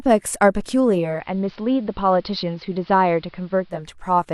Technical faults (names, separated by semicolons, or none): digital radio blending to analogue